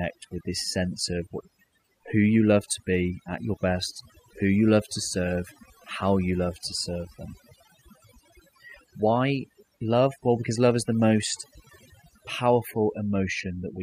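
From start to finish, the speech carries overdone noise removal: a noise reduction stage was pushed too hard on a noisy recording, cutting individual frequency bands down or out whenever they sat close to its noise estimate, and taking the softer parts of the voice with them. The result is a background collapsed into near silence sprinkled with twinkling specks.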